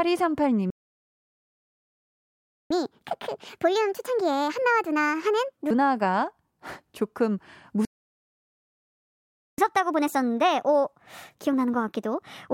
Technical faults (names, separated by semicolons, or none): playback stall; catch-up at higher speed